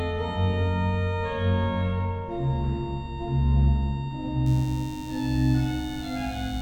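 From 4.46 s to the end at 6.61 s the audio carries DECT cordless phone buzz: a thin, steady 100 Hz buzz rich in harmonics, roughly 25 dB below the signal. Radio bursts every 10 ms from a nearby handset or base are rectified in the audio circuitry.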